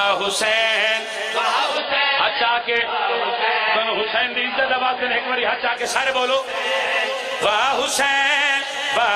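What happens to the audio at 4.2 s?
At 4.2 s the audio is inside a stretch of adaptive stream at a lower bitrate, from 1.77 to 5.77 s. The connection slowed, so a lower-quality version played. Nothing is left above 5 kHz, and codec artefacts rise. The switch is sudden and gapless, which fits a drop from about 96 to 16 kbit/s AAC.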